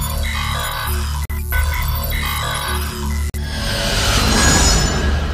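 Audio delivered in 2-second chunks leaves 44 ms of silence at each join, a gap between chunks, heard as short holes at 1.25–1.30 s and 3.30–3.34 s.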